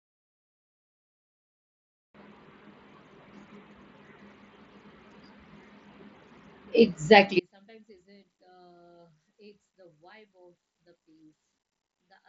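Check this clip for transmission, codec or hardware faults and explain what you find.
One fault stands out: an audio dropout to a faint residue. From 7.40 s to the end, the speech cuts off abruptly mid-flow, leaving only a faint trace about 35 dB below normal. That is likely a lost link or stalled stream, with the downstream path still live and passing leakage. The mSBC headset codec path, audible as a band stopping near 7.7 kHz, is not at fault.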